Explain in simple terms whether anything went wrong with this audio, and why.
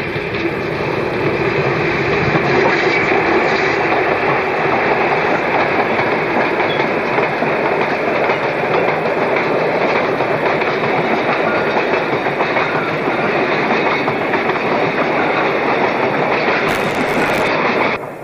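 Buffer tearing: the program filling the audio buffer and the hardware playing it slipped out of step, causing a robotic 100 Hz buzz from 16.67 to 17.47 seconds.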